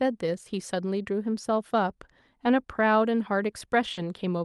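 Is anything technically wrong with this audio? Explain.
Yes, there are two kinds of packet loss in this speech.

Lost packet rebuilt from error correction: 20 ms patches at 2.45, 2.81, 3.25, 3.31, 3.35, 3.97 and 4.17 s. Each lost packet was replaced by the lower-bitrate backup copy carried in the next one, so there's no gap, just a brief rougher, grainier spot.

Short concealed packet loss: from 3.93 to 3.99 s, about 40 ms never arrived and the decoder filled it by extending the preceding sound, then blending back into the real audio. You hear a quick smear or wobble there. The last 20 ms of that stretch overlaps one of the rebuilt packets. The call codec, likely Opus, tops out around 12 kHz.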